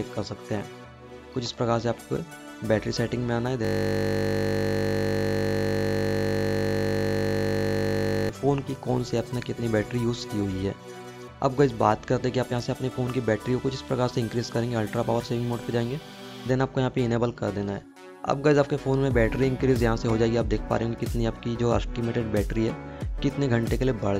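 System hang loop from 3.65 to 8.3 s: the system froze while the hardware replayed one 20 ms buffer, producing a steady 50 Hz buzz.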